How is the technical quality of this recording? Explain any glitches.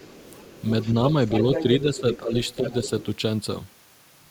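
Not great: the far end keeps bleeding into the recording, and the talker's own voice gets pulled down a couple of times when both sides overlap.

First, the other side's voice leaking through. It turns up five times: 0.00–0.62 s, 0.82–0.92 s, 1.28–1.64 s, 1.80–2.17 s and 2.47–3.05 s. It starts very faint, a good 30 dB under the talker, but around 1.3 s it's nearly as loud as the main speech. The likely cause is the loudspeaker playback getting back into the mic without the echo canceller fully removing it, so you hear a second voice underneath.

Second, speech suppressed in double talk. From 1.82 to 2.34 s the talker dips by about 10 dB for roughly 400 ms, right as that far-end leak is running. There's a shorter, shallower duck of about 5 dB at 2.59–2.65 s. Both sides are talking at once there, and the echo canceller likely can't tell the talker from the echo, so it turns everything down and the voice briefly sinks.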